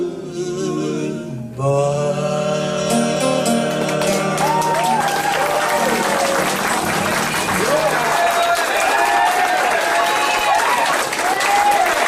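No technical faults can be heard in this audio.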